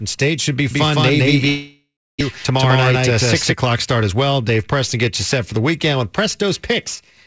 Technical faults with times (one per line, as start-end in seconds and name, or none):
0.71-3.54 doubled audio track
1.48-2.23 long network dropout
2.31-3.16 jitter buffer speed-up
3.66-4.14 jitter buffer speed-up